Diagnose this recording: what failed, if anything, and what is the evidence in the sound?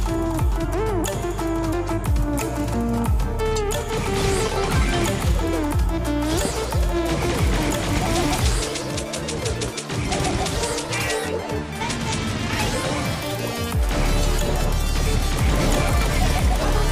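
A transient voltage step in the analogue wiring, most likely from a plug, switch contact or static discharge, reached the signal path. It is heard as a single loud pop from 6.45 to 6.48 s, peaking about 10 dB above the surrounding audio. The sound continues underneath, which shows the fault added energy to the signal rather than interrupting it. Downstream circuitry shaped the impulse into a brief pulse of roughly 24 ms, producing a sharp thump.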